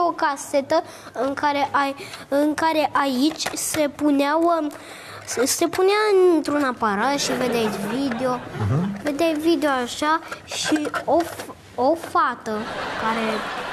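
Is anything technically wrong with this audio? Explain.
No, nothing is technically wrong with this audio.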